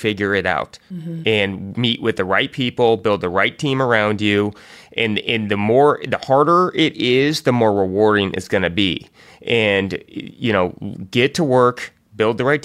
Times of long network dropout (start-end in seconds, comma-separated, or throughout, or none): none